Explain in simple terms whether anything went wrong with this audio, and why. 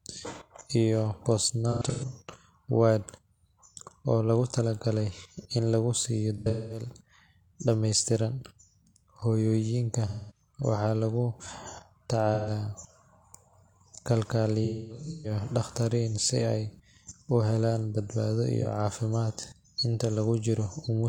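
AAC frame loss with concealment at 1.7, 6.4 (after "lagu siiyo"), 10.1, 12.3, 14.6 and 18.6 s (before "caafimaad inta"). Missing chunks were guessed from earlier sound, leaving brief smeared, noisy patches.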